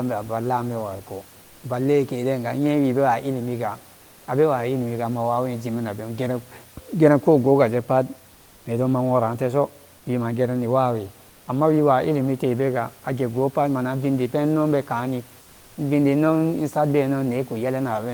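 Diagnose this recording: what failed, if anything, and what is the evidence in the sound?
Comfort noise in place of the background, at the codec stage. In four pauses the room noise, which sits about 29 dB below the speech, is replaced by a steady, featureless hiss: 1.41–1.63 s, 3.95–4.27 s, 9.97–10.05 s just before "wima gerani", and 11.29–11.47 s just before "ammawiwa illimite". The fill is level-matched or about 1 dB quieter. The likely cause is discontinuous transmission, consistent with Opus DTX, where the receiver synthesises shaped noise while the sender is silent.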